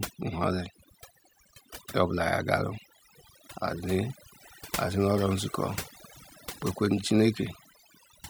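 Overdone noise removal runs through the whole recording: a noise reduction stage was set far too aggressively on a noisy source, so any frequency band sitting close to its estimate of the noise floor gets pulled right down or switched off. Quieter parts of the speech fall below that threshold and are removed along with the background noise. The gaps between phrases drop to near silence scattered with twinkling specks.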